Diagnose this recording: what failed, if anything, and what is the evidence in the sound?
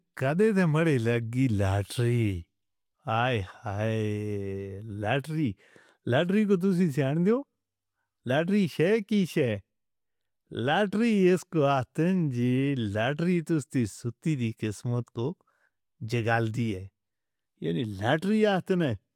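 Nothing in this recording points to a failure at any stage of the chain. The speech runs continuously, with no defect to cite at any moment.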